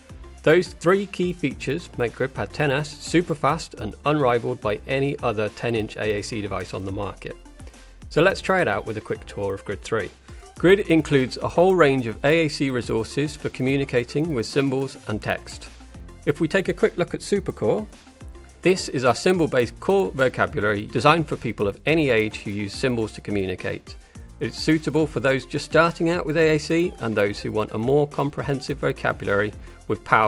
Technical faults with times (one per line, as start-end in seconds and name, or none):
0.00-30.27 resampler restarted on every block